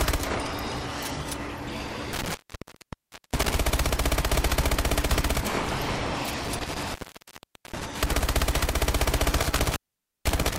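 At 2.13 s, 6.44 s and 9.42 s the audio shows intermittent contact, a loose cable or plug briefly losing its connection. The signal drops out for roughly 0.99 s, 0.80 s and 0.50 s respectively, with crackle where the contact breaks and remakes, and faint hiss while the line is open. Each disturbance spans about 1.2 to 1.8 s, the last running to the end of the clip.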